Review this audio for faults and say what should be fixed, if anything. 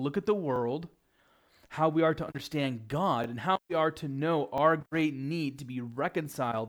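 Repeated buffer at 0.56–0.58 s, 3.24–3.26 s and 4.58–4.60 s: each time one short slice of speech plays twice, a brief stutter or click that fits a 20 ms buffer, with essentially no speech lost. On a waveform each shows an identical block repeated with a hard step at the join, and on a spectrogram a thin vertical line marks that join. Enlarging the output buffer or giving the audio thread higher priority would prevent these underruns.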